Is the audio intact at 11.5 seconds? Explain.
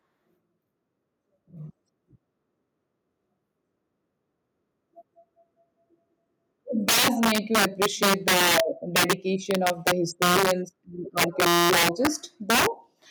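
No. Two faults overlap at that point. Integer overflow runs from 11.18 to 12.07 s. The signal is driven about 7 dB past full scale, and instead of being limited, each peak beyond the maximum wraps to the opposite sign. Loud moments become violent cracks, harsher than clipping. On a waveform, peaks that should sit flat at the ceiling jump abruptly to the bottom of the range. On a spectrogram, those jumps appear as bright vertical broadband streaks.

A system hang loop sits inside that span, from 11.47 to 11.70 s. The system froze while the sound hardware kept replaying the same ring buffer. A 5.8 ms piece, which fits a 256-sample buffer, repeats exactly about 40 times. The result is a steady buzz at 172 Hz, with essentially no audio lost around it. A waveform shows one identical short cycle tiled end to end. A spectrogram shows flat horizontal harmonics spaced at 172 Hz.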